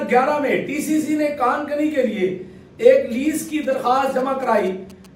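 From 3.25 to 5.06 s, GSM signalling bursts intrude. A nearby phone's radio pulses get rectified, giving galloping ticks and 217 Hz buzzes, roughly 25 dB down.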